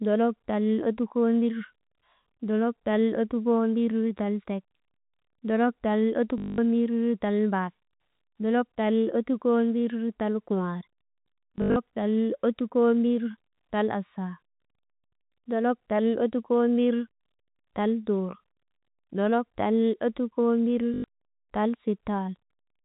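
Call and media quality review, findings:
Packet loss with last packet repeated, at the receiver's concealment stage. Missing packets are filled by replaying the last good one. The replays don't align with pitch, so longer runs buzz near 50 Hz, which fits 20 ms packets. Robotic stutter at 6.38–6.58 s (longest, 200 ms), 7.96–8.00 s, 11.56–11.76 s (scattered, longest run 80 ms) and 20.94–21.04 s. G.711 A-law telephone band limit at 4 kHz audible throughout.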